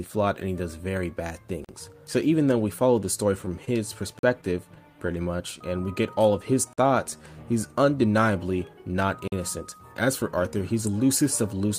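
At 1.65 s the first gap between chunks appears: a 44 ms hole with hard edges where playback stops dead and resumes. The same gap recurs at 4.19 s, 6.73 s and 9.28 s, each 44 ms, spaced about 2.5 s apart, which fits audio delivered in 2.5 s blocks with silence left at each join, from padding or a late-starting player. Nothing is lost; the sound is simply interrupted at a regular rhythm.

From 3.46 s to 5.10 s there are scattered short gaps: roughly seven small holes, none longer than about 20 ms, together around 100 ms or some 7 percent of that stretch. These point to individual packets lost or arriving late, with the receiver bridging each hole by extending the preceding sound. The result is brief ticks and hiccups dotted through an otherwise continuous stream, overlapping the second chunk join at 4.19 s.

A jitter buffer slow-down runs from 4.97 s to 7.23 s. The receiver, short on buffered audio, stretched playback by repeating single pitch periods and fragments of pauses many times over, adding 148 ms in total. 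Playback runs at about 94 percent of normal speed while pitch stays unchanged, so sounds are drawn out across this span, which also contains the chunk gap at 6.73 s.

From 10.22 s to the end of the clip a jitter buffer speed-up takes over. Here the buffer held more audio than its target, and the receiver trimmed short slices of one or a few pitch periods in quick succession to reduce delay. Playback runs at about 107 percent of normal speed with pitch preserved, giving the final stretch a compressed, faster pace.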